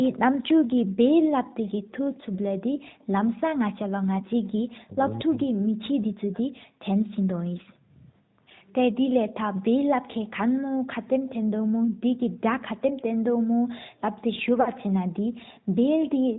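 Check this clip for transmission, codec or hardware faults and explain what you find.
Several faults are present, some running through the whole clip and others confined to particular moments.

AMR narrowband mobile codec, throughout: the speech has the band-limited, buzzy, synthetic character of the AMR-NB mobile codec, which fits its 10.2 kbps mode. The codec samples at 8 kHz and rebuilds the voice from a vocal-tract model driven by a few pulses per subframe, so nothing above 4 kHz survives and consonants lose their edge. The damage is plainly audible. Unlike a simple low-pass filter, it adds that coded, slightly artificial texture, not just dullness.

Background gated by the echo canceller, 0.42 to 3.05 s, 7.12 to 8.41 s and 11.62 to 14.02 s: in each span the room sound beneath the speech is pulled down by about 40 dB, for roughly a second in total in the first and last spans and somewhat less in the middle one. 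The echo canceller clamps the microphone while the far-end loudspeaker plays, then lets go. This differs from double-talk suppression because the background ambience, not the talker, is what vanishes and returns.

Echo leak, 1.68 to 4.48 s: a very faint delayed copy of the speech trails about 0.22 s behind, sitting roughly 35 dB below the direct voice. This is likely residual loudspeaker pickup that the far end's echo canceller failed to remove and sent back. A room reflection would arrive within a few tens of milliseconds. Here the long, fixed lag points to an echo path through the call.

Speech suppressed in double talk, 4.62 to 6.68 s: the talker's own voice dips sharply, by around 40 dB at the deepest, for roughly one and a half seconds across this span. The likely cause is an echo canceller that, with both sides active, could not separate the local talker from loudspeaker echo and attenuated everything. 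Unlike the background gating elsewhere, the speech itself is cut, not just the ambience behind it.

Lost AMR speech frames, 14.62 to 14.70 s: for about 40 ms the sound smears and sags, then recovers slightly rough. The span fits two consecutive 20 ms frames failing their checksum. The decoder reused the last good pitch and vocal-tract settings at falling gain, which produces a drawn-out fade rather than a clean gap. That fade is what separates it from a packet dropout or a gating dip.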